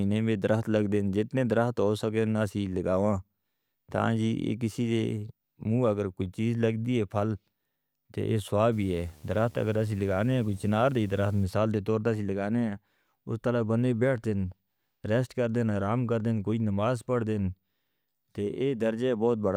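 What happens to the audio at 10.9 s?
At 10.9 s you're inside a stretch of video or display buzz running from 8.72 to 11.44 s, between "تو یہ" and "دے طور پر اسی". A screen or video cable is leaking into the audio, giving a 75 Hz buzz at the field rate with hash over it, sitting roughly 30 dB under the speech.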